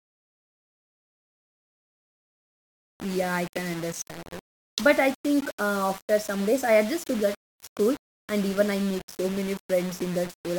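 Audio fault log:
throughout: low bit depth without dither. The speech carries a coarse, grainy distortion that shifts with every syllable. The likely cause is rounding to about 5 bits with no dither added. With so few steps, the rounding error tracks the waveform instead of spreading into a steady hiss. So it sounds like harsh grit tied to the speech. That error sits only around 20 dB below the speech. Quiet tails and pauses break up, sputtering between steps or dropping to silence.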